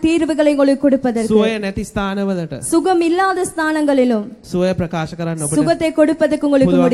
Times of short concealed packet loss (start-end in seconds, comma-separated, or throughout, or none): none